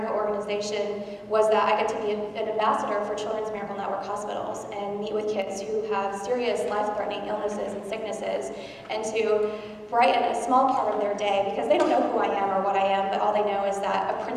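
At 5.42 s the level suddenly sags by about 6 dB for roughly 50 ms, then snaps back at 5.47 s, a quick dip in the sound. That's likely one channel dropping out: with a stereo channel briefly lost, the mono sum keeps only half the shared content.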